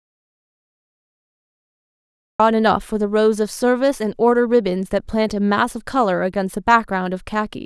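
A speech clip that opens in silence, with no room tone, until about 2.4 s: an audio dropout to silence, already under way as the clip starts, likely from lost audio input.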